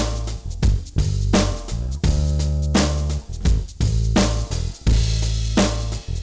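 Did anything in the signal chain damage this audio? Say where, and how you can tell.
Yes. There is hard clipping throughout the clip, introduced where a gain stage pushed the level past what the converter or sample format could hold, so every peak is sheared flat. The sound is driven about 15 dB beyond full scale, leaving a few percent of samples cut flat. That produces a constant harsh fuzz on all loud passages, with the distortion harmonics that reach above the 8 kHz ceiling of the call path cut off.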